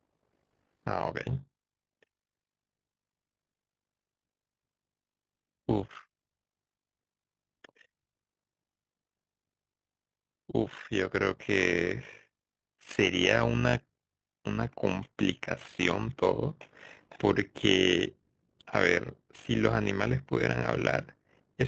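Speech with an overlap-add ripple running the whole way through: the level pumps up and down by about 11 dB roughly 50 times a second, giving a buzzy, robotic flutter. That's frames being windowed and re-summed with an overlap that doesn't add back to constant gain.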